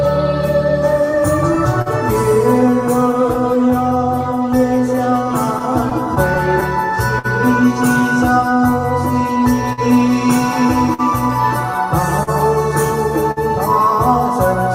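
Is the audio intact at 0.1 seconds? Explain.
No. At 0.1 s, and all through the clip, the audio stumbles with small, unevenly spaced timing hiccups: brief repeats. This is clock drift between sender and receiver; the sender runs roughly 4 percent slow, so the jitter buffer keeps draining and gets patched.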